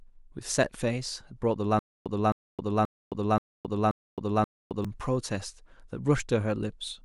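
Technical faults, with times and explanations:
1.79 to 4.85 s: stutter with silent gaps. A short burst of speech, about 264 ms long, plays and then drops to digital silence for about 266 ms. The pattern repeats six times at an even 530 ms period. The likely cause is a playback or stream stall. At each retry the last fragment is played again, then the buffer runs empty. The speech that belonged in that span never arrives and is lost.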